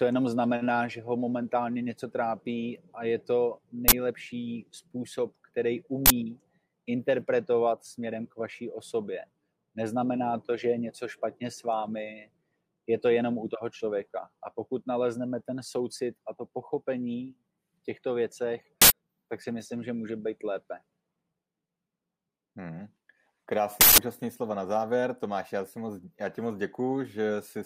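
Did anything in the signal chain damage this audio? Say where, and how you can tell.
Yes. The damage is in the driver or buffer stage: an uninitialised buffer was handed to playback before audio had been written to it, so leftover memory was played as samples. Each instance is a short, loud burst of digital noise, at 3.88 to 3.93 s, 6.06 to 6.10 s, 18.82 to 18.90 s and 23.81 to 23.98 s. The lengths of about 43, 85 and 171 ms fit whole blocks of 2048, 4096 and 8192 samples.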